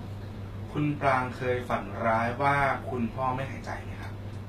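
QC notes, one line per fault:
Throughout, HE-AAC compression: the speech has likely passed through a low-bitrate HE-AAC encoder, the damage fitting something around 20 kbps, where only the lower spectrum is coded and the treble is rebuilt by copying lower bands upward under a coarse envelope. The top end sounds synthetic, its harmonics failing to match across the crossover, so s sounds come out gritty and lispy, with plainly audible coding damage and nothing above 14.9 kHz.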